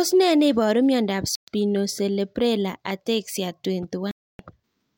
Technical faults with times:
1.35-1.48 Bluetooth stall
4.11-4.39 Bluetooth stall

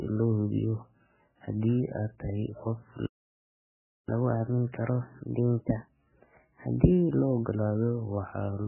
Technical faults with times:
0.00-8.67 MP3 compression
3.06-4.09 playback stall
4.09-7.09 catch-up at higher speed

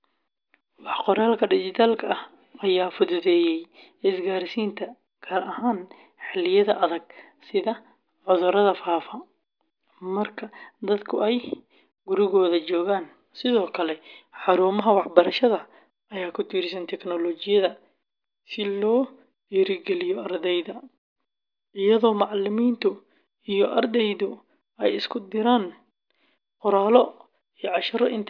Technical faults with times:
none

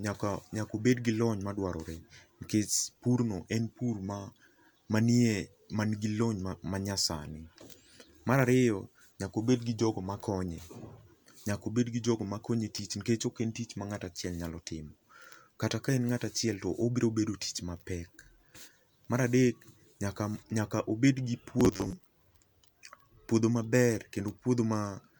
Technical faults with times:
21.60-21.95 robotic sound from repeated short buffers

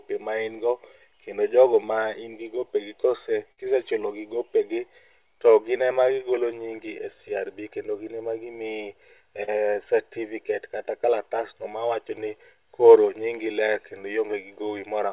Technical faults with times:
3.52-3.59 burst of packet loss
9.43-9.49 short concealed packet loss

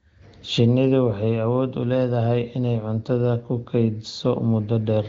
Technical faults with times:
none

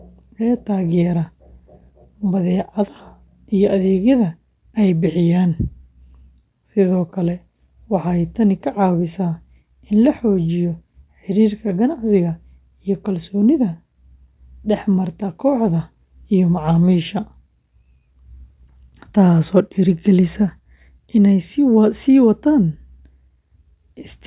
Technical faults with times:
none

